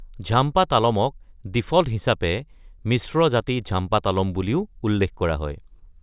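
Nothing in this speech recording stood out as a technical problem on listening.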